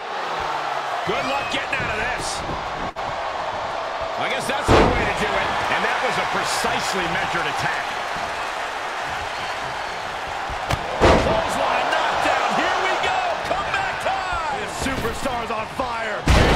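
At 2.89 to 2.98 s the audio hangs briefly in a short stall from a late packet: the jitter buffer ran dry and about 61 ms of the preceding sound was stretched to cover the gap, with nothing lost, so everything afterward runs 61 ms later. On a spectrogram this shows as horizontally smeared, frozen bands; the waveform shows a repetitive, slightly buzzy stretch.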